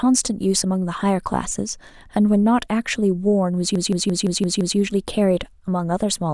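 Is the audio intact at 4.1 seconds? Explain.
No. A system hang loop runs from 3.76 to 4.78 s. The system froze while the sound hardware kept cycling through one ring buffer, so a single 171 ms piece of speech repeats six times at 5.86 Hz, a machine-gun stutter that fits a 4096-sample buffer.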